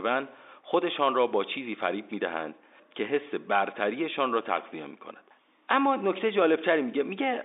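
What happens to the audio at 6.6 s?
At 6.6 s the speech runs on intact, heard through the narrow band of the G.711 telephone line it is carried on.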